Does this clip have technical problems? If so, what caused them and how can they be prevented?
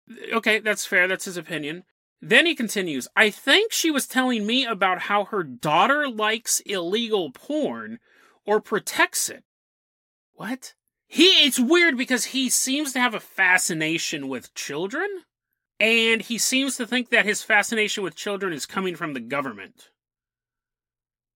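No, there are no technical faults to point to in this speech recording. With nothing going wrong, there is nothing here that needs preventing.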